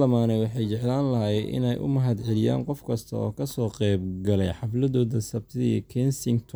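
No technical faults are audible anywhere in the recording.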